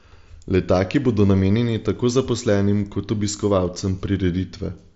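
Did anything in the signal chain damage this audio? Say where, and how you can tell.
No, nothing in the signal chain stood out as damaging this speech on listening, with the band-limited sound of the Bluetooth mSBC headset codec, which stops just below 7.7 kHz, being what that wideband headset link normally delivers.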